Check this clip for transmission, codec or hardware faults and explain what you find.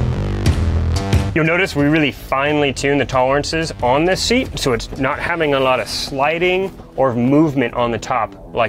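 No transmission, codec or hardware fault is audible anywhere in the clip.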